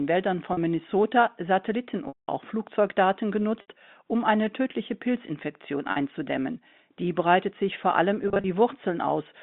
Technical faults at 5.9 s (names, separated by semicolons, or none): packet loss with pitch repetition